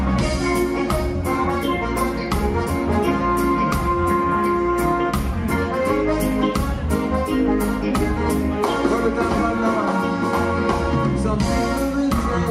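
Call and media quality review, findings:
Timecode bleed, 8.96 s to end. Steady chirping warble behind the sound, switching near 1 and 2 kHz, roughly 30 dB down. Probable source: adjacent LTC track or cable crosstalk. Rate fits 23.976 fps code. Square-wave biphase signal leaking into the audio path.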